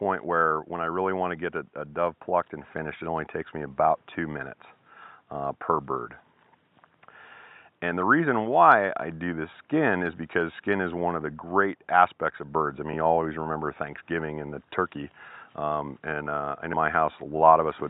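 At 12.93 s and again at 16.72 s there is damaged data in a compressed stream, each event a short blip of roughly 14 ms. Corrupted bytes in the encoded frames leave the decoder unable to reconstruct that stretch correctly. It misreads or refuses those frames, then drops sync and hunts for the next valid frame header before normal decoding resumes. Both defects are a quick disruption cutting across the audio.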